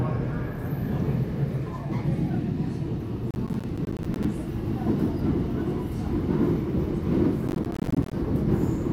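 A gritty burst of crackle tears through the sound from 3.31 to 4.25 s, and again from 7.48 to 8.13 s: processor overload crackle. The processor is missing many deadlines in a row, and each missed block drops out as a short hard-edged silence. The spacing of the clicks suggests buffers of around 10 ms.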